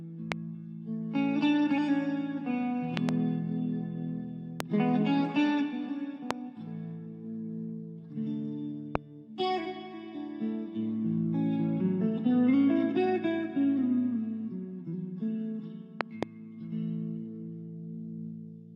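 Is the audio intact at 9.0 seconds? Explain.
No. A single loud pop at 8.95–8.98 s, likely a voltage pulse from a plug or switch, sits well above the sound, which continues underneath rather than dropping out.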